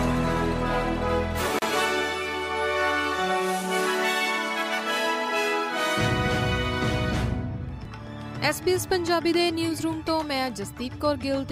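At 1.59 s the sound drops out for about 33 ms, resuming at 1.62 s: a gap at a join of encoded pieces. The audio appears to have been encoded in separate segments and spliced without trimming, so the encoder's start-up delay and the padding of the previous segment's final frame both remain as silence. The gap has smeared edges, and the sound then continues exactly where it left off.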